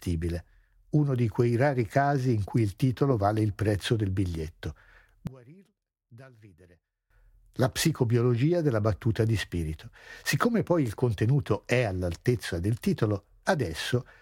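After "il prezzo del biglietto", from 5.27 to 7.10 s, the speech falls about 26 dB to a faint residue, likely one channel inverted; the waveform shrinks and the spectrogram nearly empties.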